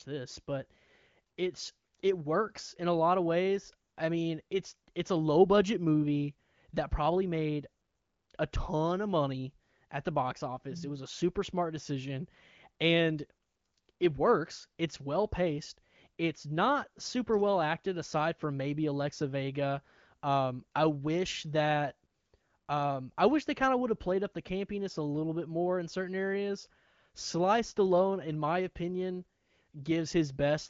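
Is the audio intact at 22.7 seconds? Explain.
Yes, at 22.7 s the speech is intact, with no dropout, click, glitch or other fault at that moment.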